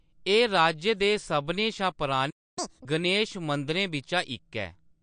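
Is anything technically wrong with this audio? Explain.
Yes, there are three faults in this speech recording.

MP3 compression affects the whole clip. Its audible smearing and watery swirl, with nothing above 9.5 kHz, likely come from MP3 encoding at a low bitrate, perhaps around 48 kbps. A spectrogram shows a hard ceiling and flickering holes.

A playback stall runs from 2.30 to 2.58 s, right after "राज्य दे सभनें शा". The output goes silent for about 0.27 s while the player likely waits for data. The waveform is flat there.

Catch-up at higher speed follows from 2.58 to 2.85 s, ending just before "गणेश मंदरें". The backlog plays at double speed, raising the pitch by roughly ten semitones. On a spectrogram, the harmonics jump upward and the sound is squeezed in time.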